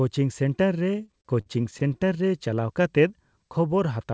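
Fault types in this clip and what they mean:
Repeated stalls (stutter): packets arrived late and the buffer ran dry twelve times, 0.92 to 2.03 s. Each gap, up to 49 ms, stretched the last sound.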